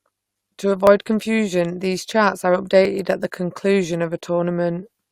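Speech with two tiny skips from overlap between stream segments, at 0.87 s just before "confusion these charts are" and at 2.85 s just before "at the conclusion", about 2 s apart. Where segment timestamps overlapped, the player trimmed 8 to 19 milliseconds of audio that had never been duplicated. The waveform shows a sudden discontinuity, and the spectrogram shows a thin vertical broadband line.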